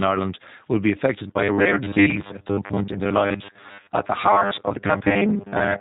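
Speech coded with the G.729 codec at 8 kbit/s throughout. Nothing above 4 kHz survives, and the voice sounds plainly rough and synthetic. From 1.16 s, right after "will be", to 5.80 s, the sound becomes a rigid, metallic robotic buzz at 100 Hz. It is likely caused by repeated short buffers, each replayed slice about 10 ms long, with most of the real audio skipped. At 3.80 to 3.88 s, about 40 ms of packet loss is concealed by the speech codec. This fits four lost 10 ms frames, and the decoder stretches the last sound into a fading buzzy tone or coloured noise.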